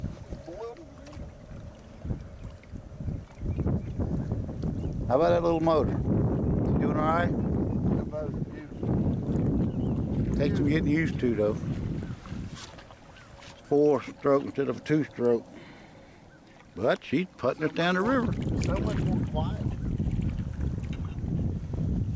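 No technical faults are audible.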